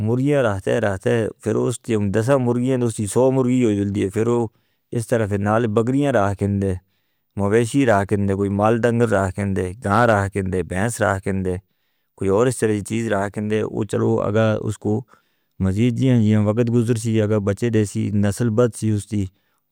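Speech clip with a short burst of hard clipping from 9.92 to 10.13 s, just before "کھندے بیس". The level runs about 3 dB past what the stage can pass, so the peaks get sliced flat and crackle.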